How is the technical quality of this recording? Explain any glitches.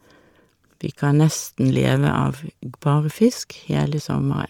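Technical quality is compromised by plainly audible codec damage throughout. This is likely Bluetooth LC3 compression. The transform codec works in 10 ms frames at a rate that fits about 48 kbps, dropping upper-spectrum detail and filling it with noise. The speech gains a grainy, breathy edge, with nothing above 20.3 kHz.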